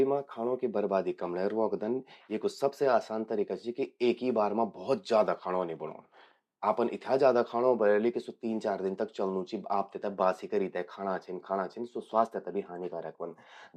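Nothing in this bit of speech trips any alarms, so there's really no technical fault to point to anywhere along the way.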